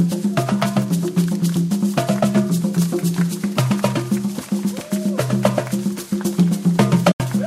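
A recording of sounds with an AAC frame loss with muting near the end, from 7.11 to 7.20 s. The audio fades into a soft-edged silent hole of about 85 ms, which fits roughly four lost frames whose spectra the decoder zeroed, with overlapping windows tapering both edges.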